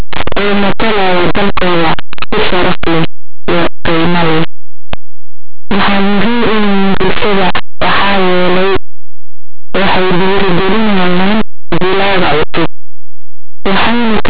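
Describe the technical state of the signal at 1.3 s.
At 1.3 s you're hearing linear audio read as companded, and it runs through the whole clip: plain 8-bit samples decoded as mu-law, so values just on one side of zero blow up into very loud, harsh distortion.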